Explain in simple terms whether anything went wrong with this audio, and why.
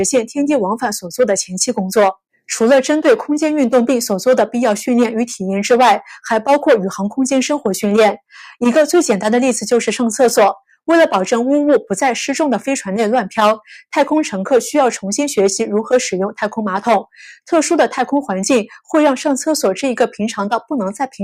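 Nothing went wrong on the technical side here: the signal holds steady throughout, with no dropouts, glitches or other audible faults.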